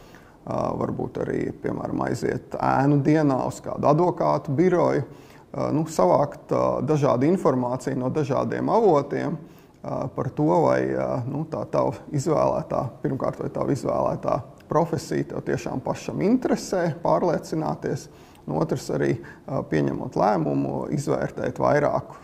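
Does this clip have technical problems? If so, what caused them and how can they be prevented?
No, the signal shows no technical problems that a listener can hear, so there is nothing here to trace to a cause or to prevent.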